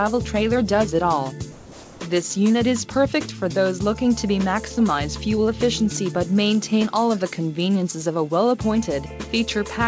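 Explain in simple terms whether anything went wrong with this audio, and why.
Comfort noise in place of the background, from 1.52 to 2.00 s: for about half a second the natural background drops out and a smooth, even hiss takes its place, slightly quieter than before. This is likely because the sending side judged nothing important was happening and briefly stopped transmitting, so the receiving end filled the gap with made-up noise roughly matching the room. Throughout, the call connection also removes everything above 8 kHz, so the top end sounds dull.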